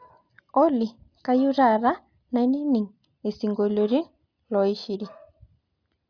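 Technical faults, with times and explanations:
Nothing in this speech recording stood out as a technical problem on listening.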